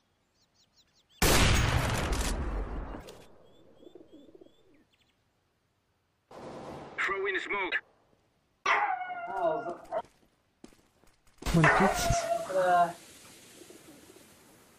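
At 2.97 to 3.05 s and again at 7.67 to 7.75 s, damaged data in a compressed stream makes the decoder misread frames and lose sync, giving brief garbled blips of about 80 ms.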